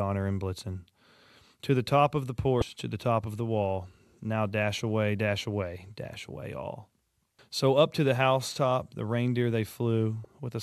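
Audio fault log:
2.59–2.62 s and 10.22–10.25 s: damaged data in a compressed stream. Corrupted bytes make the decoder misread frames and hunt for the next header, producing a brief 30 ms glitch each time, heard as a chirp, squawk, click or short hole.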